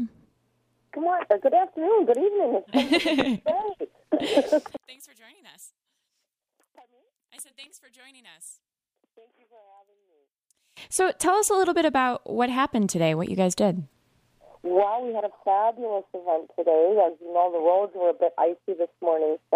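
From 4.77 s to 10.77 s the sound suddenly drops by about 27 dB. The likely cause is one channel inverted in polarity. When summed to mono, the shared centre content cancels. Only a faint difference signal remains.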